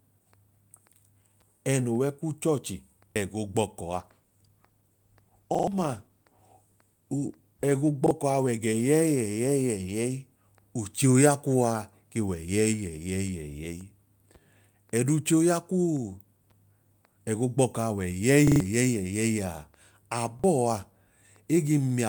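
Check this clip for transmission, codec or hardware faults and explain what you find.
Two faults are present in this speech clip: five repeated-buffer stutters and one sustained call bitrate drop.

Repeated buffer at 3.12, 5.55, 8.06, 18.48 and 20.40 s. Fresh audio arrived late, so the device replayed its last block of about 43 ms, which fits a 2048-sample buffer. Each block plays once or three extra times with hard joins. This costs roughly 40 ms or 150 ms of speech, heard as a brief stutter.

Call bitrate drop from 3.92 to 10.45 s. The bandwidth estimate fell, so the encoder was pushed from 48 kbps down to 18 kbps and held at its lowest for about 3.2 s. Coarser coding makes the speech sound rougher and less clean until the rate recovers.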